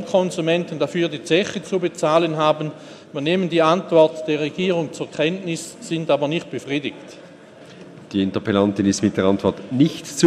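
No technical faults can be heard anywhere in the audio; the signal holds steady throughout, with no breaks, level problems or added noise.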